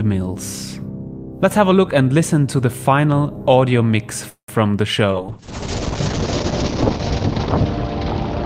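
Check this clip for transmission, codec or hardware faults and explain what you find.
Two faults are present: a brief audio freeze just past the midpoint, and a drop in call bitrate that lasts until the end of the clip.

Call audio freeze, 4.29 to 4.50 s. Packets likely stalled in transit and the jitter buffer ran dry. The receiver stretched the last sound into a fading continuation, and about 100 ms of that stretch is silence. When the audio resumes, it continues where it stopped, so about 189 ms of delay has been added and nothing is lost. On a spectrogram this looks like a smeared, decaying band followed by a blank strip.

Call bitrate drop, 5.13 s to the end. The bandwidth estimate fell, and the encoder was forced down to far fewer bits. The sound points to a fall from around 48 kbps to about 7 kbps, with the lowest rate held for roughly 1.9 s. Coarser coding makes the audio rough and muffled, and the cut-off falls from 20 kHz to 8 kHz. 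On a spectrogram, everything above 8 kHz goes dark, and it does not recover before the clip ends.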